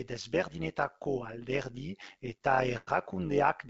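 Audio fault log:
throughout: overlap-add ripple. The speech carries a metallic buzz, its level pulsing about 11 dB at around 100 Hz. Windowed frames were recombined with an overlap that fails to sum to constant gain, so loudness dips and recovers once per frame.
2.26–2.89 s: repeated stalls (stutter). The speech drags and hiccups through seven brief holds, the longest 97 ms, together 189 ms or about 30% of the span. Late packets repeatedly emptied the jitter buffer, so the receiver stretched the last sound until data resumed; nothing is lost.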